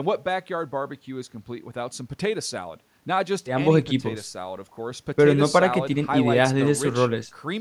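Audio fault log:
No faults found in the speech recording.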